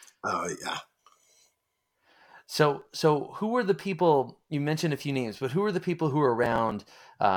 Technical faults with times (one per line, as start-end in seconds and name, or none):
2.82-2.95 processor overload crackle
6.44-6.99 processor overload crackle